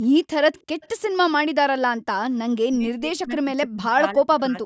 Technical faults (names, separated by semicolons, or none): echo leak; speech suppressed in double talk